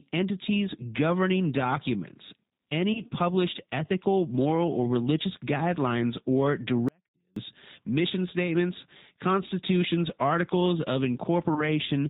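Throughout the speech, the G.729 codec at 8 kbit/s is plainly audible. The voice is rebuilt from a vocal tract filter, a pitch predictor and a few pulses per frame rather than sent as a waveform, so it sounds slightly rough and synthetic. On a spectrogram, energy stops at a hard ceiling of 4 kHz, and the harmonics look smeared and grainy rather than cleanly striated.

From 2.93 to 3.01 s, just before "published ethical moral or", VoIP packet loss concealed by the speech codec appears. The gap matches about 20 ms of missing audio, which points to a single lost packet. The decoder filled it by extending its last pitch and filter with falling gain, giving a brief stretched sound that fades. On a spectrogram this shows as a short patch that fades, with the following syllable onset weaker than it should be.

From 6.89 to 7.36 s, between "or religious guidelines or" and "mission statements constitutions articles", there is an audio dropout to a faint residue lasting about 0.48 s. 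The sound cuts off abruptly and returns just as abruptly. During the gap only a faint trace remains, roughly 40 dB below the speech, so the signal was likely lost upstream while the rest of the path stayed live. The waveform collapses to a near-flat band with sheer edges, and the spectrogram goes almost dark.

From 11.54 to 11.68 s, right after "statements constitutions articles of", a second concealed packet loss occurs, again matching about 20 ms missing. It produces the same brief fading extension and a weakened recovery, visible as a short run of decaying structure.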